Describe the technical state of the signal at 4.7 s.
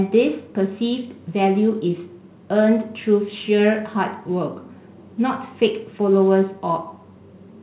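At 4.7 s the speech is intact, with nothing missing or disturbed, just the band-limited sound of a narrowband call path that carries nothing above about 4 kHz, consistent with G.711 mu-law at 64 kbps.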